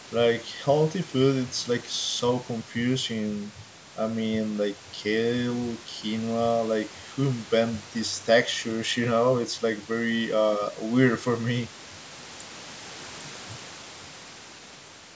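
No faults are audible in the speech; the call microphone processing's high-pass trims the lowest bass and the content stops at 8 kHz, both normal for that path.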